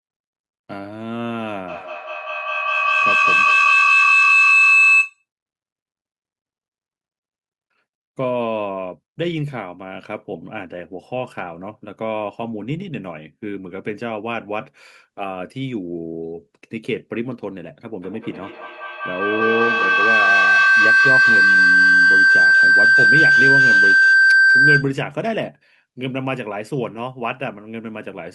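A loop between two devices in the same room on one call gains level on each trip, producing feedback howl from 1.68 to 5.25 s near 3 kHz and from 18.02 to 25.03 s near 1.5 kHz. Each howl's loop repeats about every fifth of a second, and each howl peaks about 10 dB above the speech.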